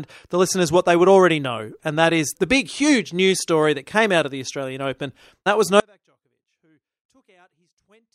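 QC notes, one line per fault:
5.8 s to end: audio dropout to a faint residue. The speech cuts off abruptly and doesn't return; only a faint leak roughly 40 dB below normal remains, likely a signal path lost upstream while the later stages stayed live. Waveform collapses to a thin trace; spectrogram goes nearly blank.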